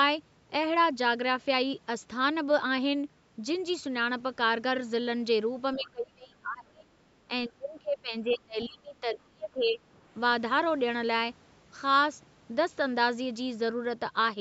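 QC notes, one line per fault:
5.76–6.88 s and 7.47–9.79 s, speech suppressed in double talk: the echo canceller likely could not tell the near talker from loudspeaker echo while both sides spoke, so it turned everything down. The speech dips by up to some 30 dB, fading and breaking up for about a second, then about two seconds.
5.74–5.9 s, 8.29–8.34 s and 8.61–8.65 s, other side's voice leaking through: residual loudspeaker echo likely slipped past the echo canceller into the microphone path. Brief scraps of a second voice surface, around 20 to 25 dB below the main speech, inside the suppressed stretches.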